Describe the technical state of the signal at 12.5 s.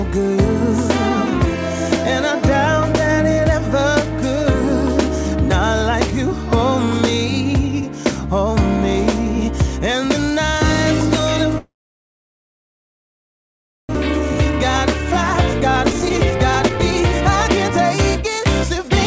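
At 12.5 s the audio sits inside a long network dropout from 11.58 to 13.97 s, likely caused by lost packets: a brief fading buzz gives way to near-silence, shown as a blank gap in the spectrogram and a flat waveform, with about 1.6 s of audio never returning.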